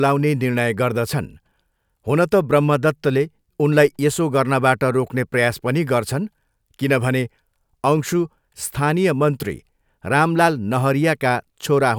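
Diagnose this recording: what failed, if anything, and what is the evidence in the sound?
No stage of the chain shows a failure, and the speech signal holds continuous throughout the recording.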